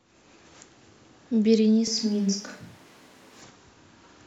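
A switch to a distant microphone runs from 1.87 s to 3.42 s. The speech abruptly turns roomy and hollow, thins out in the bass, drops by roughly 5 dB, and carries room noise that sits only about 30 dB below the voice. At 3.42 s it snaps back just as suddenly. The cause is likely a dropout of the close microphone, leaving a farther one, such as a camera's built-in mic, to pick up the room along with the speaker.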